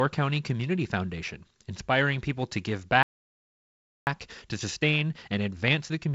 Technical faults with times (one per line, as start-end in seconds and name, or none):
3.03-4.07 playback stall
4.07-6.14 time-compressed catch-up